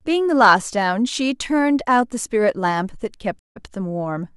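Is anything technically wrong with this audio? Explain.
Yes. From 3.39 to 3.65 s there is a stream reconnect. The connection broke, the player fell silent for about 164 ms, then reconnected and started a fresh decoder partway into the stream. The server resent a little buffered audio, so the speech resumes about 93 ms earlier than where it stopped, with a soft, muted start. That short repeat sets it apart from an ordinary dropout, where the sound would resume later and skip ahead.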